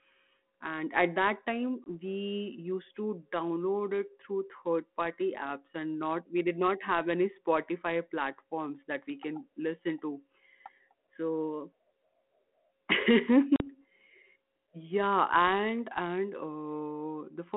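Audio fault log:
1.84–1.88 s and 13.56–13.65 s, packet loss on an ADPCM call: the first gap, between "and at that time" and "we used to", drops about 20 ms, which points to a single lost packet. The second drops about 40 ms, roughly two packets. Each gap is filled with hard-edged silence. Over the lost audio the receiving G.726 decoder's adaptive predictor and step size drift away from the sender's, so after each hole the speech comes back at the wrong level, or with a click and brief distortion, and settles within some tens of milliseconds. That recovery smear is what separates this fault from a plain dropout, where the sound resumes cleanly. The codec itself is running at 32 kbit/s within a 200 Hz to 3.4 kHz line band and adds only light coding noise.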